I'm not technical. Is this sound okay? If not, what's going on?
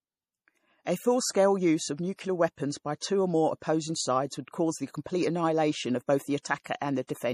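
No. Throughout the recording the speech sounds watery and swirly, with a metallic shimmer on s sounds, and nothing is heard above about 15.2 kHz, so the top sparkle is gone. This is likely MP3 compression at a low quality setting: to save space, the encoder throws away the highest treble and flickers weaker details in and out from moment to moment, which creates that unsteady, underwater quality.

There are also four short puffs of hiss just before sharp sounds, at about 2.16, 6.42, 6.63 and 6.79 seconds, each lasting roughly a fortieth of a second. This is pre-echo. The compression handles sound in small chunks and spreads its noise evenly across each chunk. When a sudden sound lands near the end of a chunk, that noise leaks into the quiet moment just before it, so the start of the sound is blurred by a brief hiss.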